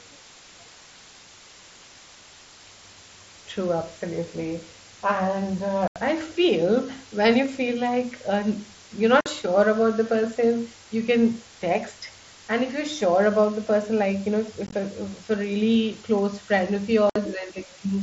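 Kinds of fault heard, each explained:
Low bit depth with dither: throughout, the speech is quantised to what sounds like about 7 bits with dither, leaving a steady, even hiss only about 20 dB below the speech.
Unconcealed Bluetooth headset packet loss: at 5.88, 9.21, 14.67 and 17.10 s, lost headset packets knock out 45 to 83 ms of speech in abrupt holes, scattered as short runs at 14.67 s, such as just before "I feel when you".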